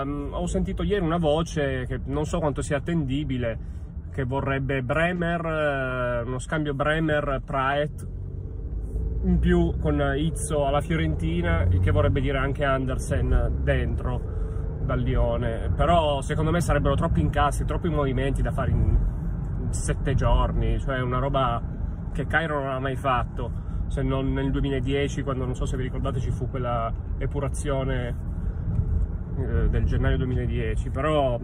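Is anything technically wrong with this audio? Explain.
No, nothing in this audio stands out as a technical problem, so there's nothing here to worry about.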